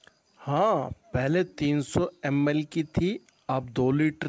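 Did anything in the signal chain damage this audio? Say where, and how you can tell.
No, nothing in the signal chain damaged this audio.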